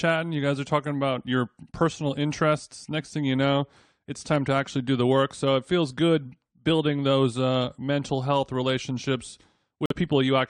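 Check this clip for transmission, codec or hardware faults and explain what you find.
One fault appears near the end of the clip, a corrupt frame muted event from 9.86 to 9.93 s. Damaged bits in the compressed stream made the decoder reject the data, and the player inserted pure silence for those frames. The speech cuts abruptly to a 70 ms hole, a length that fits two codec frames, then resumes on schedule. Concealment would fill the gap with a smoothed guess instead of dead silence, and a skip would shift the timing, which this gap does not.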